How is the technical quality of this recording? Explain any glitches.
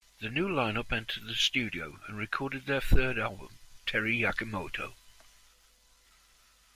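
No technical faults are audible.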